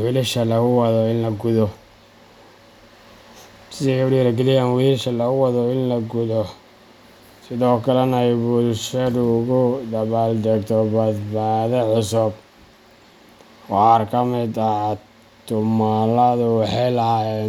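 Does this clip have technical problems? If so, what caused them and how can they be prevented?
No, nothing stood out as a technical problem on listening to this speech clip.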